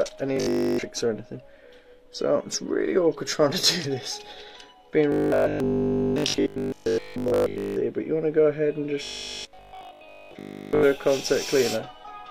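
Audio likely arrived too seldom, so the last 20 ms buffer was replayed, causing robotic sound from repeated short buffers: a rigid 50 Hz buzz at 0.37 to 0.83 s and 5.12 to 7.76 s, then mostly repeats at 9.03 to 10.83 s.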